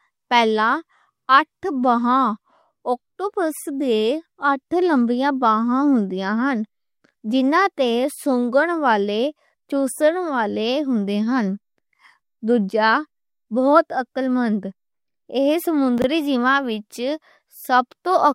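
A brief jumbled moment between 15.98 and 16.04 s: chunks out of order, with one 20 ms chunk arriving two chunks late, leaving three hard joins.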